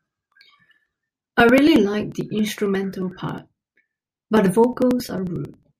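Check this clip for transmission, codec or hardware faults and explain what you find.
There's one clear hardware-side problem in this speech, periodic USB or driver dropouts. From 0.05 to 5.72 s, something stalls the audio path every 0.09 s, and around 10 ms of sound is skipped each time, about seventy dropouts overall, so you hear a steady ticking wherever there is sound.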